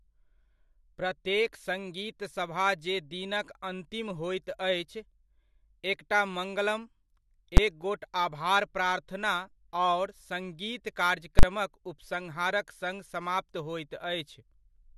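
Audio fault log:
7.57 s, invalid numbers at full scale: just before "एक गोट आभार प्रार्थना", a 10 ms block pinned at one extreme value gives a single bang, unlike clipping, which flattens only the peaks.
11.39–11.43 s, invalid numbers at full scale: between "आभार प्रार्थना आओर सङ्गीत" and "उपसंहारक सङ्ग समाप्त", the sound is replaced by 40 ms of invalid calculation output held flat far beyond the speech peaks.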